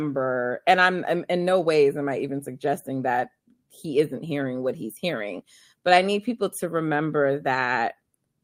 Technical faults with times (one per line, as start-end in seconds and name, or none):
none